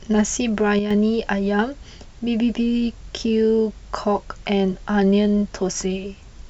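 At 0.79 s a sudden gain jump drops the speech and its background noise together by about 6 dB, then restores them at 0.91 s. A gain setting likely applied without a ramp. The waveform envelope steps down and back; the spectrogram dims evenly across all frequencies between two sharp vertical edges.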